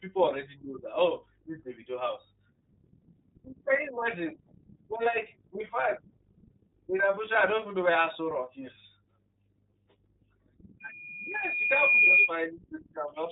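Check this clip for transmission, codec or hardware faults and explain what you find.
One codec fault runs through the whole clip. iLBC codec compression, throughout: independently coded 30 ms frames, fitting the 13.33 kbps mode, strip everything above 3.8 kHz and leave speech plainly rough and synthetic. Unlike simple band-limiting, the texture itself is grainy.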